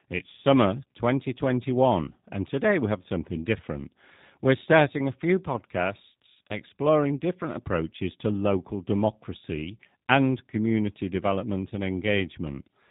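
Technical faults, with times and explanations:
throughout, G.729 codec: speech is cut off above 4 kHz and sounds rough, synthetic and buzzy from a sparse pulse-and-filter rebuild, which fits 8 kbit/s G.729A.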